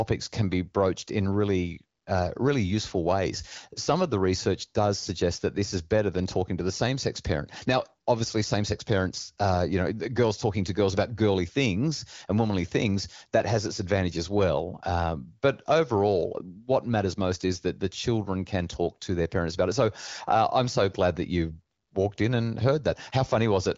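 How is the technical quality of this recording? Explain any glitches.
No glitches can be heard anywhere in the recording. The speech has the band-limited character of the AMR wideband (HD Voice) codec, with nothing above about 7.5 kHz and only light coding roughness, which fits one of its higher rates of around 16 kbit/s.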